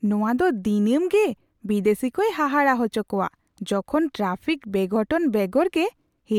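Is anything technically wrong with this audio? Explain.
No, nothing is technically wrong with this audio.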